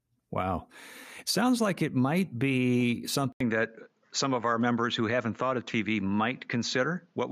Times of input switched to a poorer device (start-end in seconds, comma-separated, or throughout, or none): 3.32-7.31